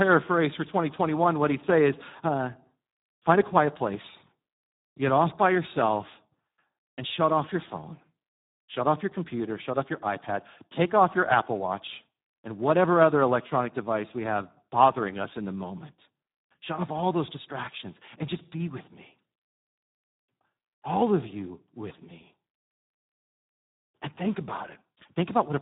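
Speex codec damage runs through the whole clip. The speech stops at 3.8 kHz, and heavy coding loss leaves too few bits for the excitation, so it sounds noisy, hoarse and edging toward robotic, which fits a low setting around 8 kbps.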